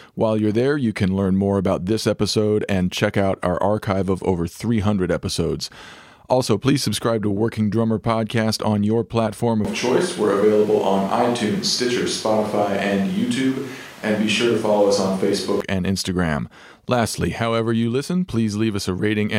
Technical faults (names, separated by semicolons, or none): switch to a distant microphone